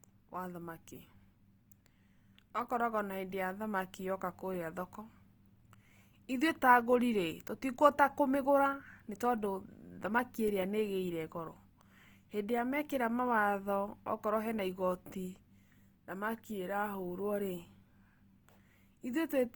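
Across the whole clip the speech sounds grainy and rough, with tones turning noisy rather than swirly. This is likely Opus compression in its music mode at a low rate, around 24 kbps. A spectrogram shows content up to about 20.2 kHz, with upper bands filled by noisy texture instead of holes.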